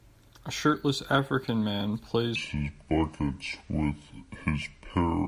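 At 2.36 s the speech drops into a wrong sample rate fault that lasts to the end. Playback runs at about two-thirds speed, roughly 7 semitones lower. That fits 48 kHz audio played at 32 kHz unconverted. The voice turns deep and sluggish.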